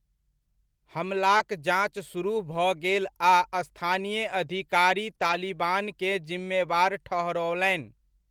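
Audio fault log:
1.37–1.41 s and 5.15–5.19 s, short concealed packet loss: about 20 ms of audio arrived too late each time, so the receiver carried the preceding sound forward, extending its pitch or shaped noise, for roughly 19 ms before merging back, heard as a brief smear or wobble.
1.39–1.41 s and 5.19–5.37 s, lost packet rebuilt from error correction: the missing stretches, 20 ms and then 100 ms, were played from low-bitrate copies carried in following packets, which fits one lost packet and then five separate ones. There is no gap, but those frames sound rougher and noisier.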